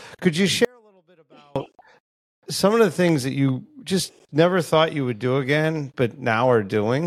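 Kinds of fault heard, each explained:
Audio dropout to a faint residue: the signal path likely lost its feed for about 0.91 s while staying live. Right after "could you" at 0.65 s the speech cuts out abruptly to a faint sound, roughly 35 dB down, returning at 1.56 s.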